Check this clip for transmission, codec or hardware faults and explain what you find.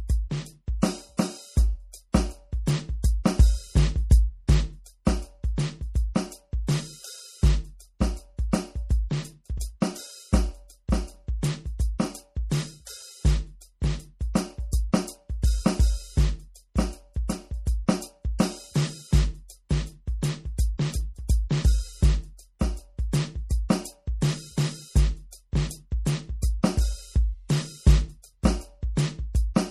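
There are two problems in this music: plainly audible codec damage running the whole way through, and three small pre-echo smears.

The first is MP3 compression, likely at a low bitrate around 48 kbps. Nothing survives above 14.9 kHz, so the top end feels shaved off. Starved of bits, the encoder keeps dropping quiet frequency detail and bringing it back frame to frame, which gives the mix that watery, swirly texture.

The pre-echo lands at 0.82, 1.17 and 9.6 s. Each time a sharp attack falls late in a coding block, and the noise budgeted for the loud hit spreads backward into the silence just before it. You hear a short hiss lasting about 11 to 14 ms, and the attack comes across softened.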